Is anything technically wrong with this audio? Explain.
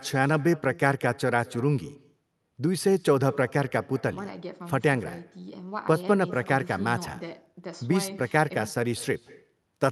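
Yes. Echo with no canceller runs throughout the speech: the far end's loudspeaker feeds its microphone and nothing subtracts it. So each phrase returns roughly a fifth of a second later as a faint copy, about 23 dB down, thinner than the original.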